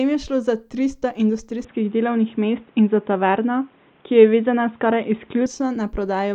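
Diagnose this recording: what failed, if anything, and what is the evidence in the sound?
Capture failed at the driver. After "je šlo za tristo", from 1.65 s to 5.46 s, speech goes dull and boxy, with nothing above 3.8 kHz. Level shifts about 5 dB, and faint new noise appears. The likely cause is an input switched to a poorer device.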